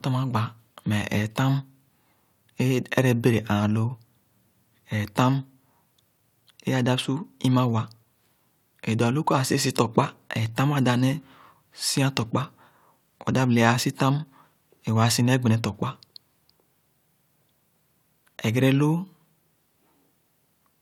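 Nothing in the speech stood out as a fault on listening.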